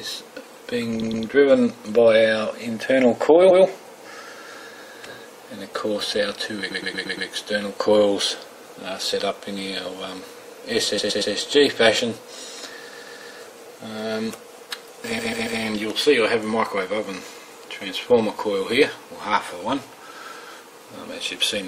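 Repeated frames stutter the sound at 1.01–1.24 s, 3.50–3.63 s, 6.70–7.28 s, 10.97–11.32 s, 12.92–13.34 s and 15.18–15.59 s. Blocks of about 116 or 139 ms, fitting runs of five or six compressed frames, replay once to five more times, stretching the audio.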